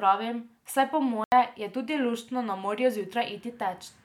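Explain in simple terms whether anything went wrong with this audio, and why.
Yes, one thing goes wrong here: just after "saj po", at 1.24 s, the speech drops into a block of digital silence for 80 ms, until 1.32 s. A chunk of the audio was swapped for zeros, so it cuts off abruptly and comes back with no fade.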